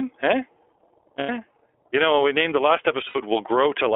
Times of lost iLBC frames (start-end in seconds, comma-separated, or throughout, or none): 1.19-1.30, 3.09-3.18